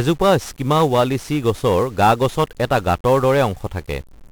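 Heavy 1-bit DFPWM compression damages the speech throughout. One bit per sample nudges the level up or down, so broadband noise buries the treble in fuzzy hiss and crackle.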